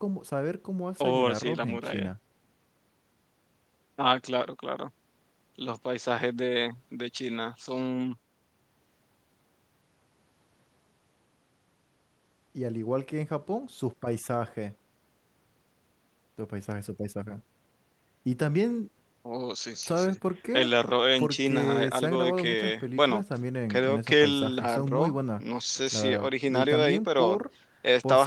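No technical faults can be heard anywhere in the recording.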